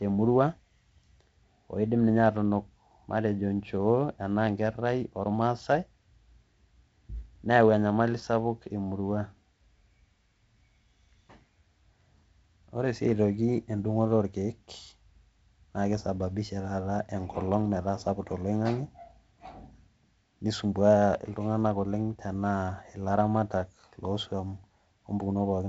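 No faults: the speech is carried by G.722 wideband telephone coding, with the slightly noisier lower band pointing to the 48 kbit/s mode, a light coding hiss, and nothing above 7.7 kHz.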